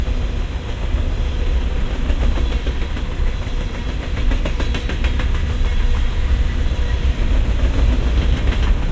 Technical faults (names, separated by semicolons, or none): none